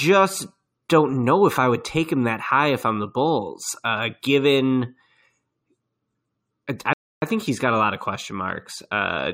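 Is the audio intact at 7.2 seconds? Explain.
No, there is a rebuffering stall from 6.93 to 7.22 s, so at 7.2 s the speech has dropped to silence. The player used up the audio it had already downloaded and paused until more data arrived, adding about 289 ms of dead air. Nothing is skipped: the speech breaks off cleanly, holds in silence for that gap, and then picks up exactly where it stopped, so the clip runs longer without losing any content.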